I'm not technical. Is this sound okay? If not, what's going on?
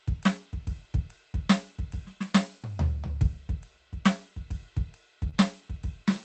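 No. Around 5.29 to 5.37 s, the music briefly smears and wobbles. This is a short concealed packet loss: a few hundredths of a second of audio arrived too late, and the receiver covered the gap by extending the preceding sound before rejoining the real music. The music, carried over a call connection, also has nothing above 8 kHz.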